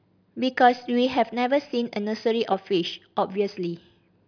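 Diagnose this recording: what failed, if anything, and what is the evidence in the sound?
Nothing in this speech recording points to a failure at any stage, from the wiring through to playback. There is no disturbance anywhere in the sound that would call for a diagnosis.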